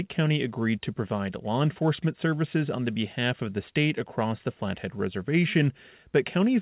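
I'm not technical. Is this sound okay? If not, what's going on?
Yes, nothing has gone wrong with this speech recording. It came through an ordinary internet call line using a standard telephone-style codec, so there is no sound above about 4 kHz, which is why it has the narrow, muffled quality of a phone call.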